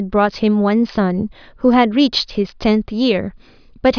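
No technical faults can be heard anywhere in the recording; nothing interrupts or alters the signal.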